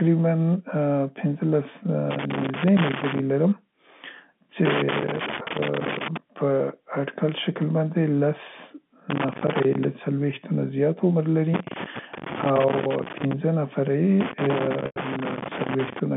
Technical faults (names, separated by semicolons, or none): loose connector crackle; packet loss with pitch repetition